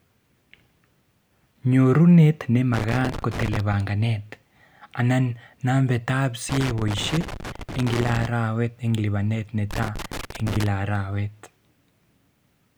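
Loose connector crackle bursts through the speech at 2.74–3.74 s, 6.49–8.26 s and 9.71–10.67 s. A worn contact keeps breaking the signal, causing irregular scratchy crackle.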